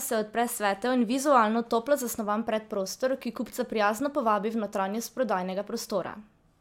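No technical faults can be heard anywhere in it.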